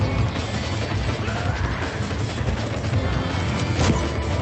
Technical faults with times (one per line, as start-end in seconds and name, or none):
none